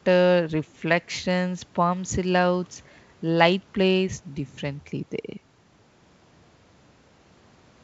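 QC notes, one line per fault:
The speech carries the bandwidth of G.722 wideband telephone coding, reaching up to about 7 kHz, with coding damage at most faint, as expected at 64 kbit/s.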